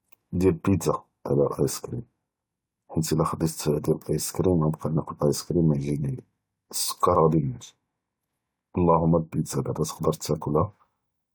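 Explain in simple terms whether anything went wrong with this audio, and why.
Nothing went wrong here: the speech comes through steadily, with no dropouts, glitches or other technical faults anywhere in the recording.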